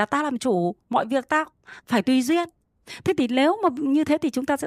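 The speech signal carries no audible technical faults at any point in the recording.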